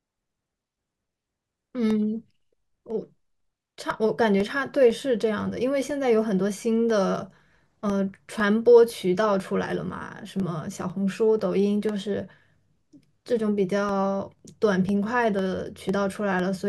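From 0.41 to 16.40 s, periodic USB or driver dropouts silence roughly a millisecond every 0.5 s: metronome-regular ticks during speech, unlike random crackle.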